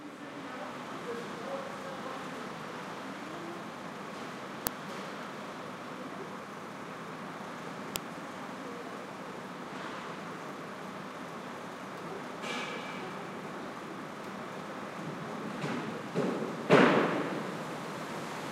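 At 4.67 s and again at 7.96 s, a loud crack cuts through the sound. Each is an uninitialised buffer: about 0.67 ms of leftover memory played as samples before real audio was written, which fits a 32-sample buffer.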